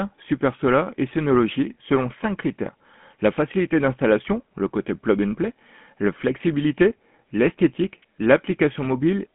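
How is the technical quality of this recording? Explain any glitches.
Quality is limited by a phone-line codec throughout. GSM full-rate codec damage runs the whole clip and is plainly audible, with the roughness that fits 13 kbps coding. The codec rebuilds the vocal tract from a filter model and drives it with sparse, regularly spaced pulses, which makes the speech sound buzzy and gravelly. On a spectrogram, energy sits in a band of roughly 150 Hz to 3.4 kHz and nothing appears above 3.8 kHz.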